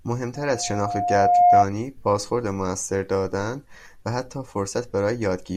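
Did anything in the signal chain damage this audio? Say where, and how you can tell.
Yes. A loudspeaker feedback squeal sits in the analogue acoustic path, from 0.35 to 1.66 s: a pure 711 Hz tone swells over about a second to roughly 10 dB above the speech. The microphone is hearing its own loudspeaker, with loop gain above unity at that frequency.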